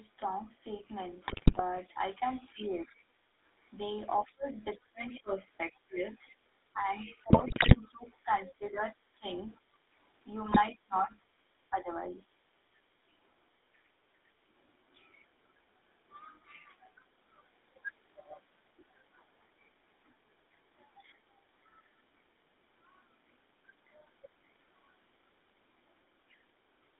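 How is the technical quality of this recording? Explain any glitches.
The technical quality is poor. The whole clip is plainly coloured by an old mobile codec, and it carries several short line and echo-control glitches in its first 14 seconds.

The GSM full-rate codec is present throughout. The speech is confined to a band of about 250 Hz to 3.7 kHz, so it sounds thin and boxed-in. The codec rebuilds the voice from a vocal-tract model fed by a coarse, regularly spaced pulse excitation. That gives the speech a plainly audible buzzy, gravelly edge. The sound fits the 13 kbps GSM full-rate codec.

GSM bit errors appear from 1.28 to 1.61 s, from 7.30 to 7.77 s and from 10.46 to 10.59 s. A weak radio link corrupted the coded frames before decoding. Damaged filter, pitch and gain values warp the spectrum and make the level jump frame by frame. In these stretches the speech breaks into squawks, pops and gargling.

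Speech suppressed in double talk occurs from 2.52 to 2.87 s, from 4.26 to 9.74 s and from 10.72 to 12.33 s. The talker's level sags, loses its top end or drops out in pieces. The dips reach roughly 15 dB, and about 20 dB in the long middle stretch, where around two seconds in total are affected. This is likely an echo canceller that could not tell the talker from loudspeaker echo while both sides spoke, so it pulled everything down.

The other side's voice leaking through is heard from 2.82 to 2.96 s, from 4.25 to 5.2 s, from 7.1 to 8.52 s and from 13.73 to 13.88 s. A second, faint voice sits behind the talker. It is about 20 to 25 dB down, and much fainter at 13.7 s. This is likely loudspeaker playback on the talker's device that the echo canceller failed to remove fully from the microphone.

Background gated by the echo canceller occurs from 3.04 to 3.35 s. The room sound suddenly dips by about 9 dB for roughly 0.3 s, then comes back. 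The canceller clamped the microphone hard while the loudspeaker was active and released it afterwards. The result is a brief hole in the ambience, like a gate closing and reopening.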